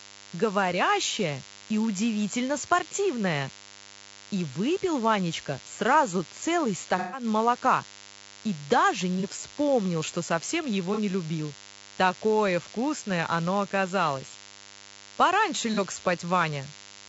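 Right from the start there's a DECT cordless phone buzz under the speech. It's a thin, steady 100 Hz drone with a comb of harmonics above it, sitting about 20 dB below the talker. The cause is a handset or base nearby firing its radio burst every 10 ms, and something in the audio chain rectifying that burst into the signal. It never lets up, so you hear it through pauses as well as speech.

Also running the whole way is a rough, grainy quality to the voice. There's noise filling the gaps between the harmonics and a top end that sounds thin and a bit synthetic. That's likely low-delay AAC compression, AAC-ELD at a low rate, something in the region of 32 kbps. At that bitrate it can't spend enough bits to code the voice's pitch structure cleanly, so the harmonics smear into hash.

On top of that there are four patches of AAC frame loss with concealment. The first and biggest runs from 6.98 to 7.24 s, right after "сразу целый" and just before "молока и даже". 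About 150 ms of audio went missing there, and the decoder papered over it by recycling the last good spectrum, so it comes out as a smeared, noisy, phasey blur. Three shorter hits follow, each covering roughly 30 ms. One is at 9.20 to 9.24 s, after "молока и даже" and before "вспомнил что совсем его". Another is at 10.94 to 10.99 s, just after "вспомнил что совсем его". The last is at 15.74 to 15.79 s. These are brief smudgy glitches rather than dropouts.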